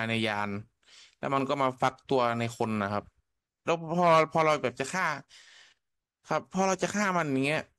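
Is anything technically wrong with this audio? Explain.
No, nothing technically wrong can be heard in this speech recording.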